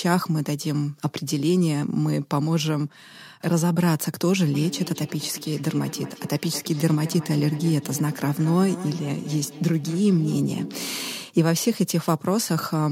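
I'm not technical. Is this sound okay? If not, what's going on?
No. There is feedback echo between two devices from about 4.5 to 11.3 seconds. Two devices in the same room are on the call, and one plays out what the other's microphone sent. That microphone then hears it and sends it back again. Each device can only cancel the echo of its own sound, so the speech comes round again roughly every fifth of a second, sounding thinner and more ringing, though quieter than the talking itself.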